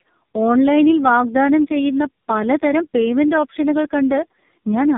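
Right through the clip you get tandem speech coding: the speech sounds like it went through three speech coders in a row, each re-coding the last one's damage. It's rough, warbly and muffled, with nothing above 3.8 kHz, which fits an AMR-NB link at the end.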